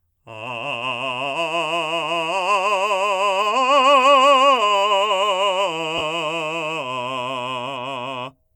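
At 5.98 to 6.01 s, about 30 ms of lost LE Audio frames (fits three 10 ms frames): the decoder repeats the last spectrum with scrambled signs, smearing tones into noise. A spectrogram shows a brief blurred vertical band where harmonic lines dissolve, and the waveform shows a short stretch of noisy fill. The light lossy compression running throughout leaves only slight traces around it.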